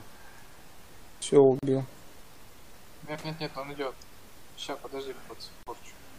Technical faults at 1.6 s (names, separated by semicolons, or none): gap at a join of encoded pieces